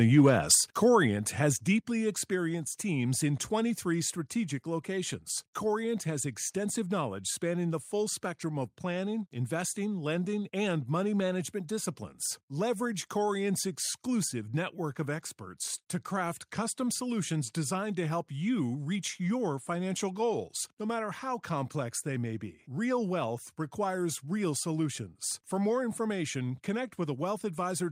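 Microphone overload runs from 0.01 to 0.55 s at the very start of this speech clip. The loudest peaks go about 5 dB past the converter's ceiling, so their tops are flattened. A small share of the samples is cut off, which gives those syllables a harsh, crackly edge. The likely cause is an input volume set too high for the talker's level. Microphone volume stepped down follows at 0.55 s and again at 1.56 s. At each point the voice and the background fall together by about 4 dB in a single abrupt step, about 8 dB in total. The first drop comes right at the end of the distorted stretch. That timing likely reflects the call software reacting to the clipping by lowering the device's input gain in fixed increments rather than smoothly.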